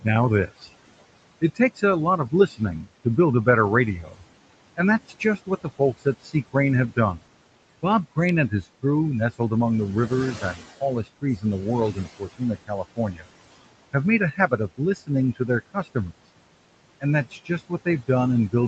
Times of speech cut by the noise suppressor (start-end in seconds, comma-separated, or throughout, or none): 0.02-0.69, 1.41-3.47, 4.02-4.23, 4.77-7.25, 7.83-8.85, 10.08-13.29, 13.93-16.14, 17.00-18.68